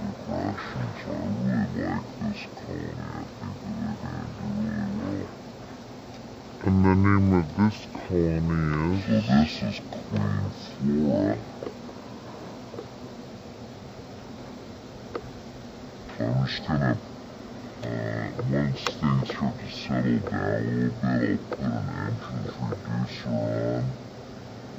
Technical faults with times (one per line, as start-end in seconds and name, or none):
0.00-24.78 stereo read as mono